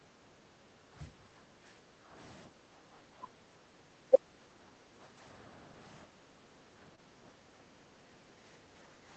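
From the start to 2.14 s, again from 2.5 to 3.82 s, and from 4.42 to 4.96 s, the background is gated by the echo canceller. While the far-end loudspeaker was active, the canceller pulled the microphone level down, so the room tone sinks and then recovers once it releases. The deepest drops are about 9 dB, 7 dB and 8 dB. On a waveform the noise floor between sounds visibly steps down in those spans. On a spectrogram the background haze thins across all frequencies and then fills back in at each release.

Between 4.1 and 4.19 s the sound itself is briefly pushed down by about 15 dB for a few hundredths of a second. This is likely speech suppressed in double talk: both ends were active together, and the canceller could not tell near-end sound from loudspeaker echo, so it attenuated everything. On a waveform it shows as a short notch carved out of the envelope. The spectrogram shows a brief vertical gap where the energy fades.

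From 5.17 to 5.19 s a single lost packet is rebuilt from error correction. The next packet carried a low-bitrate copy of those 20 ms, and the decoder played that copy, so nothing goes silent. The frame just sounds grainier and noisier for an instant. On a spectrogram the harmonic detail in that 20 ms slice turns smeared and speckled, with no gap in the energy.

At 6.95 to 6.99 s comes a short concealed packet loss. About 20 ms never arrived, and the receiver synthesised a continuation of the preceding sound, then crossfaded back into the real signal, giving a brief smear or wobble. The waveform shows a slightly too-regular stretch with a soft seam at each end. The spectrogram shows a blurred patch where the spectrum is simply carried forward. All of this sits within a call band that stops at 8 kHz.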